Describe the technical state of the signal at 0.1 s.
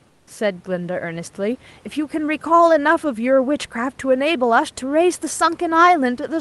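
Comfort noise in place of the background runs from 0.07 to 0.27 s, likely from discontinuous transmission: the real room hiss gives way to a flat, featureless synthetic noise about 4 dB quieter.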